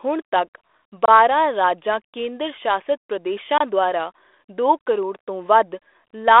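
At 0.32 to 0.38 s there's a pop with a short rough burst: bit errors on an ADPCM link. A flipped bit knocks the decoder's step size and prediction off, so the damage rings on briefly. The line sounds like G.726 at 32 kbit/s, band-limited to 300 Hz to 3.5 kHz.

Then there are two gaps between chunks, at 1.05 to 1.08 s and 3.58 to 3.61 s. Each is a 25 ms hole, 2.5 s apart, at a chunk join. Nothing's missing, just interrupted.

At 4.24 to 4.26 s comes another, denser hit of ADPCM bit errors, a brief crackly pop with a quick level wobble.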